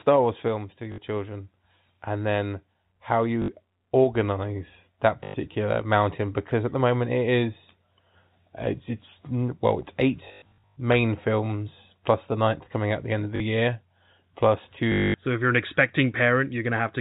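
Packets were lost on the way, and the receiver filled each gap by replaying the last packet it had, which is packet loss with last packet repeated. It happens at 0.92–0.98 s, 3.42–3.48 s, 5.24–5.34 s, 13.36–13.40 s and 14.92–15.14 s, and it is scattered across 10.28–10.76 s, where 360 ms is lost in runs of up to 100 ms. The gaps fit 20 ms packets, so the repeats buzz at about 50 Hz, giving a robotic stutter over the band-limited G.711 telephone sound.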